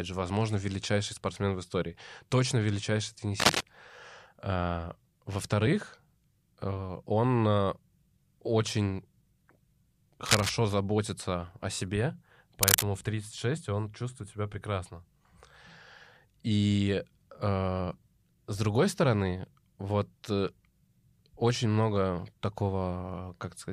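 Speech, with three short bursts of cable scratch noise: 3.40–3.64 s after "в истории точно величайший", 10.25–10.50 s before "заботится о себе", and 12.62–12.84 s right after it. Each rustle sits around speech level or a bit above, likely from a worn lead or connector being moved.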